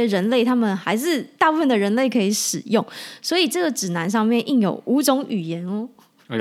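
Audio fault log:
Nothing stood out on listening to this speech recording.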